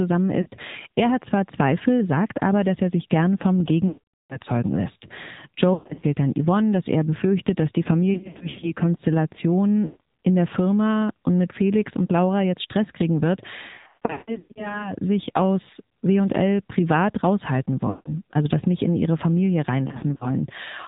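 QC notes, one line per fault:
throughout, AMR narrowband mobile codec: the AMR-NB encoder's low bitrate, consistent with its 7.4 kbps mode, models the vocal tract with only a few pulses per subframe, and nothing above 4 kHz passes, so the speech sounds muffled, buzzy and plainly synthetic.
0.42 to 0.48 s, lost AMR speech frames: about 40 ms of speech frames failed their checksum, and the decoder filled the gap by repeating the last good pitch and filter settings at falling gain, which gives a brief dip or warble.
3.88 to 4.38 s, lost AMR speech frames: right after "er sich gern vom", a continuous run of about 420 ms was lost. The concealed sound is drawn out, fades to silence, and returns weak or rough.
5.74 to 6.04 s, lost AMR speech frames: about 200 ms of losses scattered over 280 ms, the longest run 120 ms, make the sound stutter and smear into repeated warbling fragments.
8.14 to 8.71 s, lost AMR speech frames: after "er befürchtet dass die", about 240 ms of losses spread over 480 ms, runs up to 80 ms, produce repeated brief dips and a rough, choppy texture.
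9.86 to 10.00 s, lost AMR speech frames: a 140 ms gap was concealed by repeating the last frame at decaying level, so the sound stretches into a buzzy smear and sags toward silence.
13.76 to 14.86 s, lost AMR speech frames: about 580 ms lost across 800 ms, the longest run 160 ms, the worst stretch, breaks the speech into fading, warbling pieces with rough recoveries.
17.90 to 18.12 s, lost AMR speech frames: between "privat raushalten" and "also das nicht in", a 160 ms gap is drawn out and faded, and the speech resumes weak for a moment.
19.88 to 20.29 s, lost AMR speech frames: about 120 ms lost in runs of at most 40 ms, scattered over 320 ms, gives short repeated dips and flutter.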